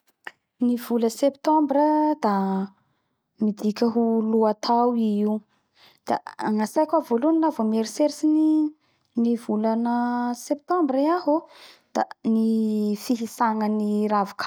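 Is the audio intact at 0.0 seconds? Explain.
Yes, the speech at 0.0 seconds is intact, with no fault audible at that moment.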